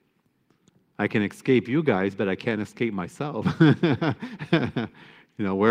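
Listening to the speech recording turns up nothing that stands out as a technical problem at any point.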